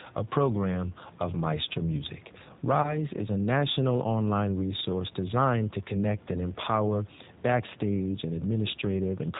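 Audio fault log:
throughout G.729 codec: nothing above 4 kHz survives, and the speech sounds rough and slightly synthetic, plainly so, because it is rebuilt from a vocal-tract filter, pitch predictor and sparse pulses, which fits an 8 kbit/s codec. Unlike simple band-limiting, the background room noise warbles rather than just dulling.
2.82–2.98 s VoIP packet loss concealed by the speech codec: just before "is a national online" the sound smears into a buzzy tone or coloured noise that fades as the decoder extrapolates its last pitch and filter. The gap points to about 20 ms of lost audio. Unlike a dropout, there is no silence, and weakened, distorted speech lingers after packets return.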